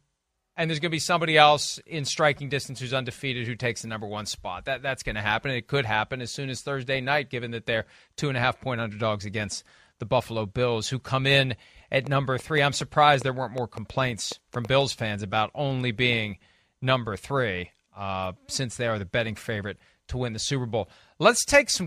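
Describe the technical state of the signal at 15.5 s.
At 15.5 s the signal is intact, with no audible fault at that moment in the speech.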